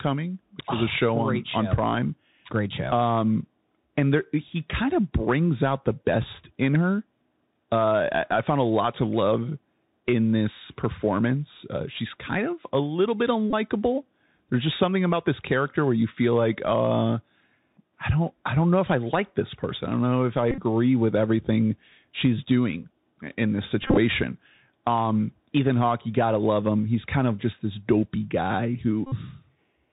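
Bluetooth CVSD headset codec runs through the whole speech clip, and its damage is plainly audible. The sound has been squeezed through a one-bit delta coder whose step size has to chase the waveform, which fits the 64 kbps narrowband headset link. Everything above 4 kHz is gone. Sibilants come out scratchy, loud bright passages smear where the step can't keep up, and a fine granular hiss sits beneath the speech.

Bluetooth headset packet repeated appears first at 13.50 to 13.54 s, where about 22.5 ms of audio was lost and replaced by re-decoded copies of the previous packet. The repeats arrive every 3.75 ms, so the gap becomes a brief buzz near 267 Hz rather than silence. It returns at 20.51 to 20.58 s, with 56.2 ms lost in patches over 67.5 ms and no single run much beyond 20 ms. The next instance, at 23.83 to 23.98 s, loses 82.5 ms scattered across 142.5 ms, again with runs of around 20 ms, so the buzz stutters on and off. 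The last, at 29.07 to 29.14 s, is a solid 52.5 ms run, which points to about fourteen lost packets.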